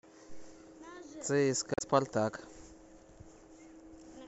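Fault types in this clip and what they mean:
Damaged data in a compressed stream: a brief glitch from about 1.74 to 1.81 s breaks into the speech for roughly 75 ms, because corrupted bytes made the decoder misread those frames and lose sync until it found a valid frame header again.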